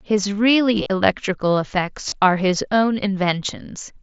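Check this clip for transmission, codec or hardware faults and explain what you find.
Two short dropouts of concealed Bluetooth headset packet loss occur, at 0.76 to 0.90 s and 2.09 to 2.12 s. Voice packets from headset to phone went missing. The receiver filled each gap by repeating the best-matching recent stretch of waveform. In the first, about 75 ms was lost across 135 ms, with runs up to 22.5 ms. It sounds like a brief buzzy flutter. The second covers 30 ms and adds a slight warble as normal mSBC wideband audio resumes.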